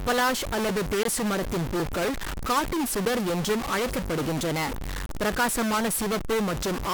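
A stuck bit runs through the whole speech clip, likely from a broken data line or converter, so about half the samples are offset by one fixed bit weight. It adds distortion with a noise floor filling the pauses, and the waveform shows stepped, offset samples. From 0.69 s to 6.21 s, about seven buffer slips recur every 1.09 s as regular clicks, likely from clock drift between two devices. Each slip drops or repeats a small block of samples, roughly 50, which fits a clock error of around 1000 ppm, and shows as a thin vertical broadband line. A gap between stream segments puts hard-edged silence at 1.03 s for about 19 ms, at 3.05 s for 9 ms, and from 5.06 to 5.09 s for 31 ms, following 2-second segment boundaries. Each gap is a flat silent stretch in the waveform and a blank vertical strip on the spectrogram. No audio is lost at these gaps.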